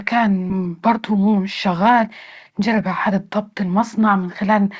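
At about 0.50 s, with later audio already waiting, a stretch of roughly seven-tenths of a second was dropped. This skip ahead leaves no gap or fill. The sound on either side is butted straight together, so part of the speech simply vanishes.

From 0.59 to 2.08 s, and again from 2.50 to 4.67 s, the buffer was running fuller than its target. To shed the extra delay, it repeatedly cut out pitch-period-sized pieces, removing roughly 150 ms and then roughly 200 ms. This jitter buffer speed-up makes the speech run about 9% fast at unchanged pitch, so it sounds hurried. Through all of this, the G.722 call path leaves nothing above 8 kHz.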